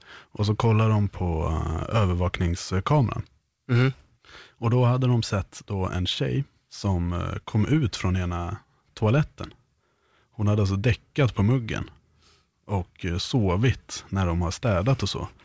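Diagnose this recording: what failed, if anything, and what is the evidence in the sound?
Nothing failed in this recording.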